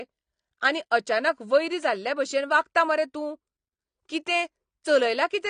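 Throughout the speech, likely AAC compression at a low bitrate, around 32 kbps, has thinned the spectrum, leaving the sound dull and smeared with fizzy, warbling sibilants.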